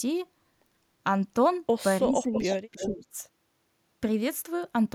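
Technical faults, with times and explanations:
2.05–2.55 s, speech suppressed in double talk: the speech sinks by about 10 dB while the far side talks, likely an echo canceller turning down its own talker along with the loudspeaker echo.
2.33–2.53 s, echo leak: a faint copy of the speech returns 329 ms late, roughly 10 dB down, likely loudspeaker pickup the far end's canceller missed.
2.72–2.88 s, echo leak: another copy arrives 329 ms behind, about 10 dB quieter, likely residual loudspeaker echo sent back uncancelled.
2.75–3.13 s, speech suppressed in double talk: the speech dips deeper, about 15 dB, during overlapping talk, likely the canceller suppressing the talker along with the echo.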